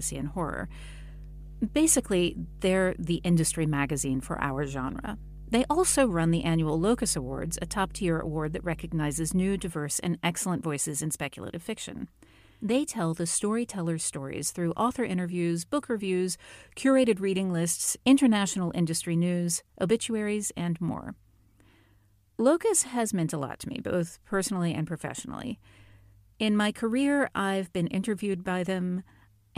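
From the start to about 9.7 s there's mains hum, a steady 50 Hz drone sitting fairly close under the speech, clearing just before "and excellent voices in". A ground loop or nearby transformer was bleeding the power line into the signal path.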